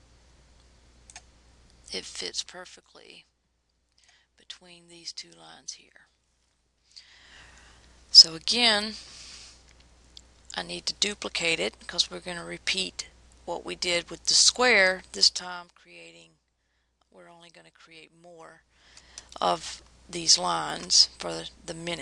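Zipper noise appears twice. From 15.16 to 15.8 s the level drops by roughly 20 dB. From 18.36 to 19.2 s it rises by about the same amount. Each move happens in 1 dB jumps, around 30 per second. Every jump clicks, producing audible ticking.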